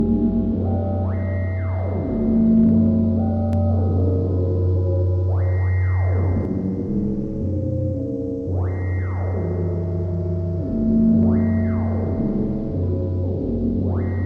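From 3.53 to 6.45 s a doubled audio track appears: a dry copy trails about 300 ms behind, roughly 5 dB quieter, likely from a second, slower capture path.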